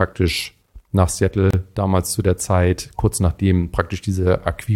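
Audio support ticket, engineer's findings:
Gap at a join of encoded pieces, 1.51 to 1.53 s. A gap of about 29 ms cuts the speech, with smeared edges, just before "damals zu der". Probable component: segment concatenation. Separately encoded pieces were joined untrimmed, leaving encoder delay and end-frame padding.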